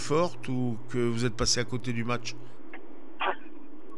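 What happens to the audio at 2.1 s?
At 2.1 s the audio carries regular ticks from a resampler restarted on every block, running from 1.5 s to the end. Each 100 ms block is converted from 48 kHz to 24 kHz alone. So every edge misses its neighbours, giving ticks at 10 Hz.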